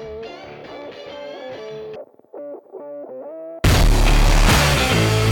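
A stage is driven about 10 dB past what it can pass from 3.64 s to the end, so hard clipping flattens the peaks and every loud sound turns into harsh fuzz.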